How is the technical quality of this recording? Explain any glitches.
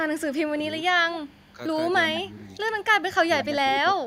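The recording has two recurring call-path problems: stray echo and a voice that gets pushed down while both sides talk.

An echo leak appears from 1.14 to 1.52 s, 2.15 to 2.84 s and briefly around 3.39 to 3.45 s. The likely cause is a far-end echo canceller that failed to remove its loudspeaker pickup and sent it back. The result is a faint delayed copy of the speech, trailing by 203 ms in the first stretch and 188 ms later, sitting about 20 dB below the voice, and nearer 15 dB in the short final scrap.

Speech suppressed in double talk follows, from 1.52 to 2.48 s and from 3.22 to 3.96 s. With both ends active, the echo canceller likely could not tell its own talker from the returning echo and attenuated everything. The voice dips in pieces, mildly at first (about 5 dB, over roughly 0.4 s in total), then more sharply later, sinking by about 15 dB across roughly 0.3 s of the second stretch.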